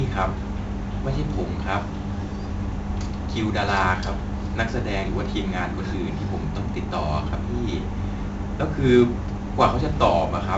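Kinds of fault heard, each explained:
4-bit ADPCM compression: the speech is stored as coarse 4-bit steps from a predicted value, so heavy gritty hiss tracks loudness and roughens sharp onsets throughout. A spectrogram shows level-following broadband noise and nothing above 7.8 kHz, which fits 64 kbps at a 16 kHz rate.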